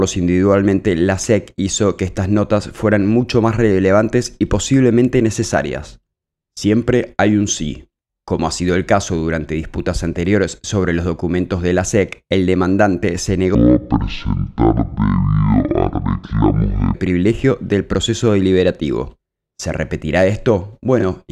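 From 13.55 to 16.94 s the audio suddenly drags: everything turns slow and deep, dropping by about ten semitones, then snaps back to its normal pace and pitch. This is a section at the wrong speed, running at 0.529 times the original rate, so pitch and tempo fall together. The likely cause is an edit or playback stage that handled just that stretch against the wrong clock, stretching it to nearly twice its length.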